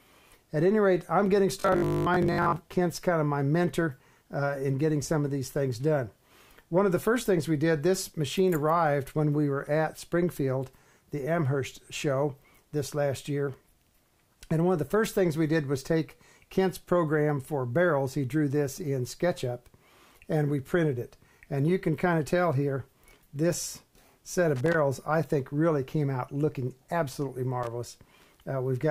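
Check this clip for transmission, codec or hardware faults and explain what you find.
Two kinds of fault turn up here: a robotic stretch near the start and a couple of connector crackles towards the end.

From 1.60 to 2.60 s there's robotic sound from repeated short buffers: a rigid 50 Hz buzz over about half the audio, likely from 20 ms chunks being replayed while fresh audio ran late.

Loose connector crackle hits at 24.56 to 24.74 s and again at 27.63 to 27.67 s, irregular scratchy bursts from a contact making and breaking as it moves.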